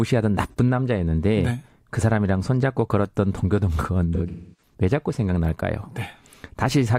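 AAC frame loss with concealment at 0.48 s and from 4.14 to 4.73 s: the decoder patched missing audio from the last good spectrum. The first gap, about 43 ms, fits one lost frame and smears briefly. The second, scattered losses with a run near 0.3 s, decays toward silence before fading back.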